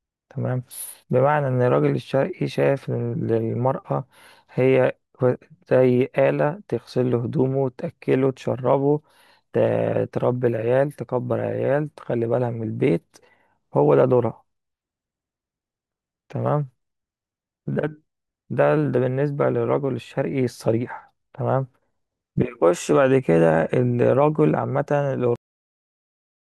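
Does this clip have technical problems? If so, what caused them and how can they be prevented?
Yes. At 25.36 s the speech stops abruptly mid-sound and drops straight into digital silence for the final stretch, with no natural decay or room tail. This is a cut-off end: the last buffers of audio were never written to the file or played out, so the recording simply ends where the data runs out rather than where the speaker finished. To prevent it, stop recording only after the writer has flushed all pending buffers and closed the file cleanly.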